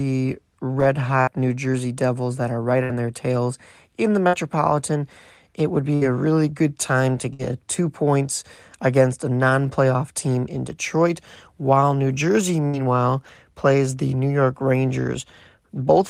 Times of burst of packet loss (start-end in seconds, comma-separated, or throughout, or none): 1.21-1.30, 2.83-2.92, 4.27-4.36, 5.95-6.04, 7.33-7.42, 12.67-12.76